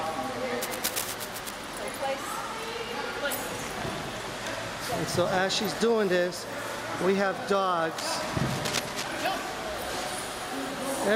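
From 0.62 to 1.51 s, and again from 7.98 to 9.25 s, dense, uneven bursts of scratching and rustling ride over the sound, only a few decibels below it. This is cable scratch noise. The likely cause is a worn cable, connector or control carrying a DC voltage being moved, so its contact resistance jumps about rapidly. Unlike steady hiss, it comes and goes with the movement, and unlike an isolated click, it lasts close to a second each time.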